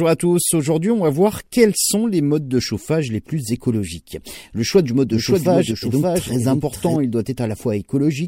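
Right after "choix du mode", at 5.10 s, the speech suddenly picks up a second copy of itself trailing about half a second behind and roughly 5 dB quieter. It's a clean, full-band duplicate with no room colour or decay, so it sounds like two overlapping takes, not an echo. That's a doubled audio track, likely from the signal being captured twice through a slower path. The copy cuts out just as abruptly at 6.96 s.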